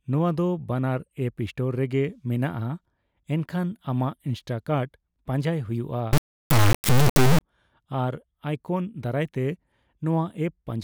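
A speech clip with an integer-read-as-float fault from 6.13 to 7.41 s. The audio becomes a harsh, extremely loud square-wave buzz, which fits 32-bit integer samples decoded as 32-bit float.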